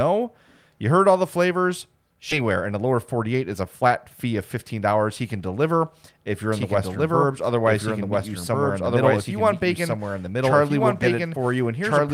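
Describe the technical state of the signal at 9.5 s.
At 9.5 s the audio carries a doubled audio track, running from 6.52 s, just after "can deliver if you're", to the end. A second full-band copy trails by about one and a half seconds at roughly equal level, likely from a slower parallel capture path. It sounds like two overlapping streams with no reverb tail. On a spectrogram the same patterns repeat, shifted in time. The waveform starts abruptly denser at 6.52 s.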